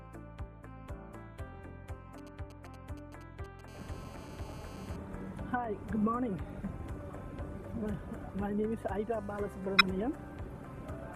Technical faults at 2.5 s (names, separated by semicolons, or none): GSM signalling bursts